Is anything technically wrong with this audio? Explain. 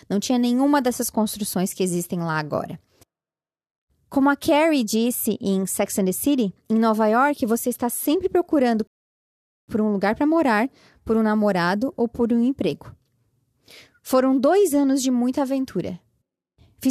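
Yes. At 8.87 s there is a rebuffering stall. The player used up the audio it had already downloaded and had to halt playback until more data arrived. The speech drops abruptly into silence, holds there until 9.68 s, and then picks up exactly where it broke off, with nothing skipped or repeated. The result is a dead gap of about 0.81 s inserted into the middle of the clip, stretching its running time without losing any of the sound.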